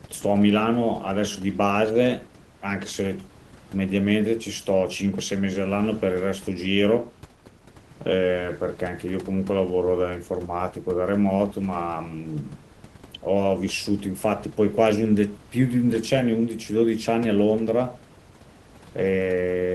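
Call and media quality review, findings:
No system faults found in the speech; the room noise sits about 22 dB below the talker and belongs to the recording, not the signal chain.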